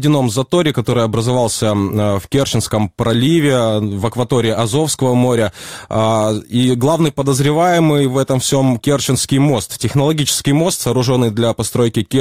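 No technical faults can be heard anywhere in the audio; the signal stays steady and intact throughout.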